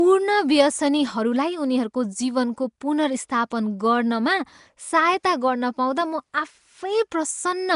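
From start to finish the speech carries a rough, hissy halo and a smeared, underwater quality, the marks of what is likely Nellymoser compression, Flash's old microphone codec, at a rate that fits about 44 kbps. With only two bits per sample, weaker bands get nothing and are refilled with noise. A spectrogram would show speckled, grainy patches where detail should be, blurred harmonics in each short block, and an empty band above 10.6 kHz.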